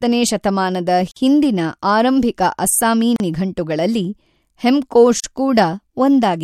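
At 1.11 s the speech drops out for 49 ms, until 1.16 s. It happens again at 3.16 s and at 5.20 s, each time for about 38 ms. The dropouts repeat every 2.0 s. Each one is a gap at a join of encoded pieces. The audio was encoded in separate chunks and joined untrimmed. Each chunk's start-up silence and end padding remain. The silences have smeared edges, and the speech resumes exactly where it stopped.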